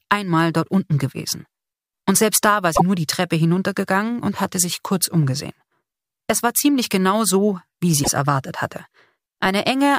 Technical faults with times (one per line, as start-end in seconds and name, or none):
2.75-2.81 broken MP3 bit reservoir
8.03-8.08 broken MP3 bit reservoir